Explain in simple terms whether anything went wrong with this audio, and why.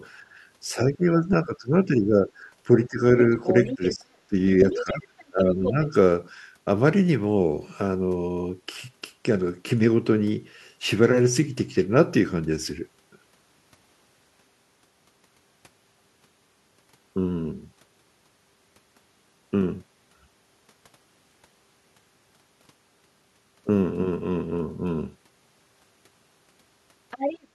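Two things went wrong, mostly during the opening seconds. The first is speech suppressed in double talk. The talker's voice dips and thins at 0.72 to 2.45, 2.87 to 3.02, 3.39 to 4.35 and 4.73 to 5.94 seconds. Both sides were likely talking at once, so the echo canceller turned everything down.

The second is the other side's voice leaking through. A quieter second voice comes through at 3.44 to 4.04, 4.6 to 5.71 and 27.11 to 27.47 seconds. It is likely the other side playing on the talker's own loudspeaker and being picked up by the microphone, which the echo canceller did not fully remove.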